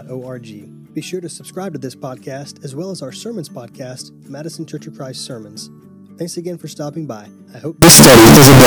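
From 7.82 s to the end at 8.66 s, the sound turns into very loud, harsh distortion, with quiet moments blaring as loudly as everything else. This is likely signed and unsigned mixed up: flipping the top bit of what sound like 16-bit samples makes every zero crossing leap across the full range.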